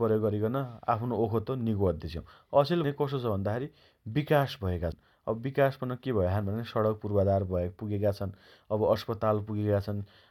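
The speech skips ahead at 2.84 s and again at 4.92 s, each jump losing about a tenth of a second of sound, likely a dropped buffer (overrun). The waveform shows an abrupt seam with no gap.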